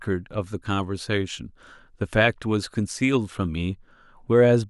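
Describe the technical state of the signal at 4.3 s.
At 4.3 s the signal is intact, with no audible fault at that moment.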